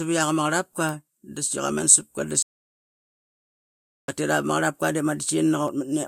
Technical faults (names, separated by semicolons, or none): audio dropout to silence